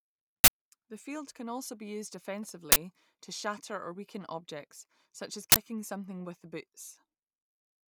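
At 0.44–0.48 s, 2.72–2.76 s (between "can be also used" and "to shatter or weaken") and 5.52–5.56 s (between "weaken objects such as" and "something with the"), an uninitialised buffer breaks into the speech. Each 40 ms block played before audio was written to it, so leftover memory came out as samples: a harsh, loud burst of digital noise. The waveform shows a dense slab of noise, and the spectrogram a bright vertical band across all frequencies.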